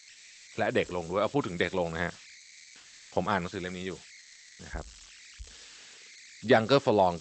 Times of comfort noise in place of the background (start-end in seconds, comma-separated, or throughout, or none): 0.00-0.47, 2.39-3.11, 4.19-4.59